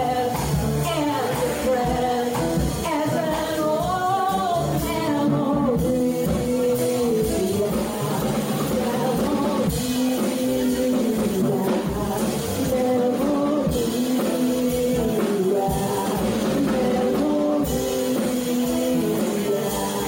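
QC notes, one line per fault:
No faults heard anywhere in this clip.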